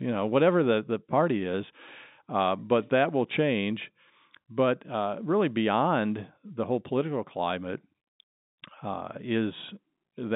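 No technical faults can be heard in the speech, which carries the band-limited sound of mu-law G.711 telephone coding, spanning about 150 Hz to 3.7 kHz.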